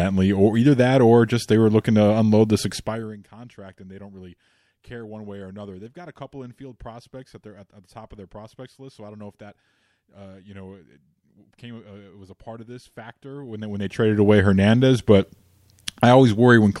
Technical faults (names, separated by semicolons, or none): zipper noise